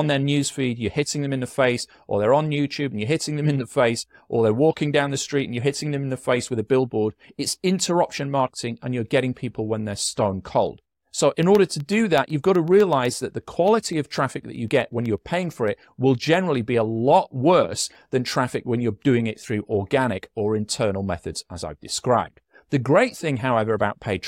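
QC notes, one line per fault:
11.43–15.68 s, periodic USB or driver dropouts: a steady train of small ticks, about eight per second (one every 0.125 s), around forty in all, ending just before "it will generally be". At that fixed interval something briefly stalls the USB bus or audio driver, and a fraction of a millisecond of speech is lost and replaced by silence. Each tiny gap breaks the waveform abruptly, so the ticks ride on the speech.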